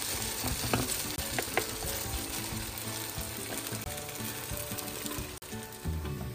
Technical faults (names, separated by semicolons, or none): block of digital silence